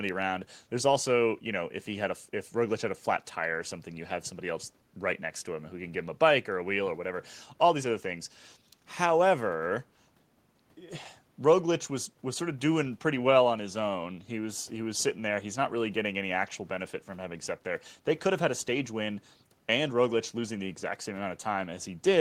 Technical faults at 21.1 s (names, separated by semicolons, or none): none